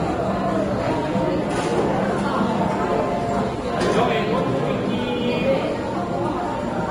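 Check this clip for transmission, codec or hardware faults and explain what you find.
Two faults run through the whole clip: lossy codec damage and converter timing instability.

Vorbis compression, throughout: nothing above 10.6 kHz, grainy hiss and smeared attacks, likely from Vorbis coding at around 30 kbps. The hard band limit separates it from jitter.

Sample clock jitter, throughout: timing wobble of a couple of microseconds leaves roughness around 40 dB below the sound. It tracks loud, bright passages and disappears in quiet ones.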